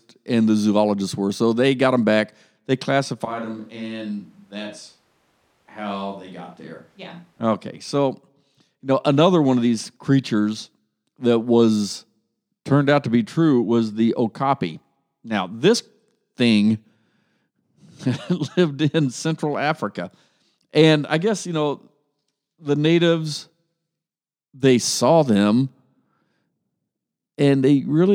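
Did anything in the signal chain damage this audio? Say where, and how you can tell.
Yes. From 3.25 s to 7.40 s the speech abruptly turns roomy and hollow, loses bass, drops by about 10 dB and sits on audible room noise. It snaps back just as suddenly. This is a switch to a distant microphone at the capture stage, likely a close mic dropping out so a farther pickup carried the signal. A simple gain dip or low-cut filter would thin the tone without adding room reverberation and a raised noise floor.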